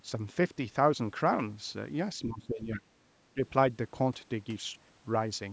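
From 2.19 to 2.92 s, and briefly at 3.34 s, the speech ducks by up to roughly 25 dB: speech suppressed in double talk, likely from an echo canceller mistaking overlapping talk for echo.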